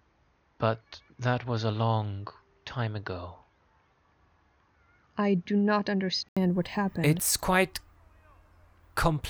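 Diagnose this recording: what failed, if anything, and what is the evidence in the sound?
From 0 to 6.37 s the speech stops at 6.6 kHz, flat spectrogram ceiling, about 5 dB lower; an 80 ms waveform gap precedes "what happened". Likely input switched to a poorer device, driver stage.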